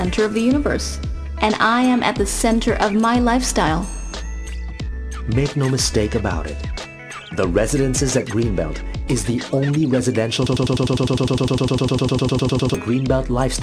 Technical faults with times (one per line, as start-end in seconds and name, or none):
10.47-12.75 broken-record loop